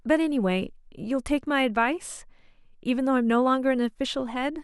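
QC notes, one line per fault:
No technical faults turn up anywhere in the recording; the signal stays continuous and stable over its whole length.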